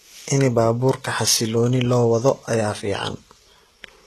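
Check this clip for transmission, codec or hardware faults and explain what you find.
There's one codec fault running through the whole clip: HE-AAC compression, and the damage is plainly audible. The treble above the crossover isn't the original. Spectral band replication has rebuilt it by copying lower bands upward and shaping them with a rough envelope. So the s sounds come out gritty and a bit lispy, and the top end stops dead at 12.4 kHz. That points to a very low bitrate, around 16 kbps, and this codec is the likely culprit.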